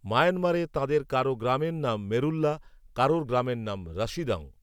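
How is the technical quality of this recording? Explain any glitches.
Listening closely to the speech, no glitches or technical problems stood out.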